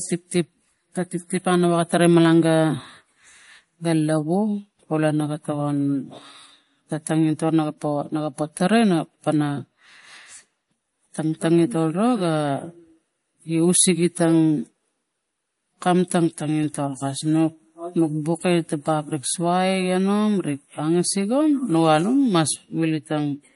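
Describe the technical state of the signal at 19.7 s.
At 19.7 s the speech carries MP3 compression damage that runs through the whole clip: nothing sounds above 11.2 kHz and weak spectral detail flickers between frames, giving a watery, swirly texture, likely from a starved encoder around 48 kbps. A plain low-pass filter would dull the top without that swirl.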